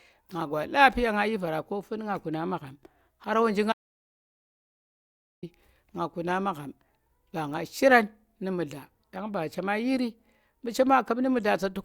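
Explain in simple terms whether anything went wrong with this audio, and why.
Something did go wrong: there's an audio dropout to silence from about 3.73 to 5.43 s. The speech just stops mid-flow, and for roughly 1.7 seconds there's dead, total silence, not even the faint background hum you'd expect in a room, and then it picks back up abruptly. That kind of pure nothing likely means the input itself got cut, say a loose cable or a mute, while recording carried on. Whatever was said there is simply gone.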